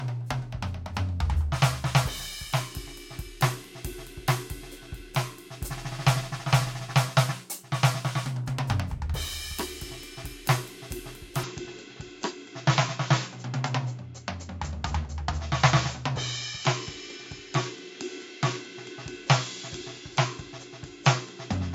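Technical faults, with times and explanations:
11.44–21.74 s, input switched to a poorer device: the music abruptly loses everything above 7.6 kHz and turns dull, with no gap and no real level jump, plus a faint new noise floor well below the music. That's likely a mid-recording change to a narrower-band microphone.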